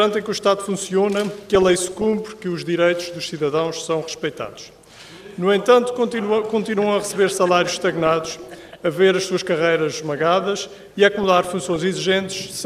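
Four bursts of DAB burbling turn up, at 1.55–2.18 s, 4.31–4.73 s, 7.89–8.74 s and 11.13–11.83 s. Weak reception lets bit errors, a fraction of a percent, past correction, so short blips of noise appear in single MP2 sub-bands.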